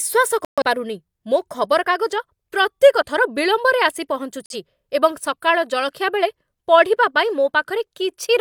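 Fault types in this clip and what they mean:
Digital broadcast dropout: The receiver stopped getting usable frames, so it muted the speech until clean frames arrived again. Here the sound drops to silence twice. The first hole runs from 0.45 to 0.62 s, a gap that fits about three lost frames. The second runs from 4.46 to 4.55 s, shorter, and fits a single lost frame. Speech resumes further on, and whatever was sent during each gap is gone.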